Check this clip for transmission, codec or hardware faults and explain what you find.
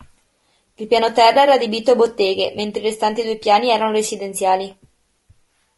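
Two faults show up in this speech clip: codec damage running the whole way through, plus one short dropout.

Across the entire clip the voice sounds rough and grainy, with noise filling the gaps between harmonics and a thin, synthetic top end. That's most likely low-delay AAC compression (AAC-ELD). Its short frames resolve pitch poorly, and the damage fits a bitrate around 32 kbps.

From 1.33 to 1.36 s there's a brief smeared, noisy patch. That's AAC frame loss with concealment: about 20 ms of audio, consistent with a single lost frame, went missing, and the decoder patched over it from the previous good spectrum.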